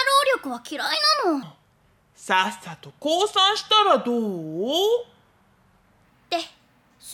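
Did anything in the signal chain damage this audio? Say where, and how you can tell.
Yes. From 1.43 s to 6.05 s the sound runs at the wrong speed, at 0.763 times normal, so it drops about five semitones and drags audibly, then snaps back. Pitch and tempo fall together, which separates this from a pitch-shifter or time-stretch, where one moves without the other. The stage is likely playback or an editing step reading that section against the wrong sample clock, stretching every waveform cycle by the same factor.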